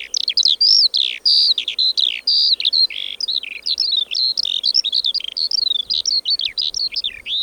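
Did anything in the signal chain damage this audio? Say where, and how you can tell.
No, nothing in the signal chain has damaged this recording of sounds. Listening through, no stage from capture to playback leaves any mark on the audio.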